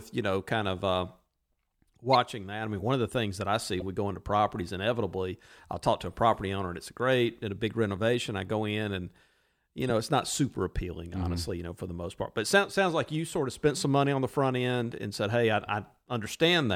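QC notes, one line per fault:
2.13 s, 3.80–3.82 s and 9.90 s, corrupt frame decoded: quick chirpy blips before "that I mean one", "we go into properties" and "know it's not super", where damaged compressed frames got played anyway and misread data sprayed energy into the wrong frequencies.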